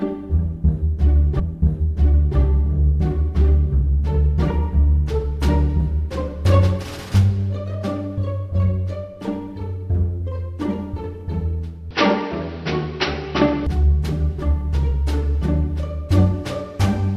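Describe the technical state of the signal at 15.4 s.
At 15.4 s the signal is intact, with no dropout, clipping, glitch or other fault audible at that moment.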